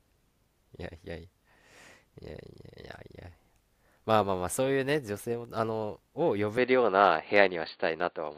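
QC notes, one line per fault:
6.57–8.38 s, input switched to a poorer device: at 6.57 s the speech abruptly turns duller and boxier through to the end of the clip, with nothing above 4.6 kHz, a level change of about 5 dB, and a faint new noise floor sitting well below the voice. There is no gap at the change. This is likely a switch to a different, band-limited microphone or headset call profile with its own tone, gain and background.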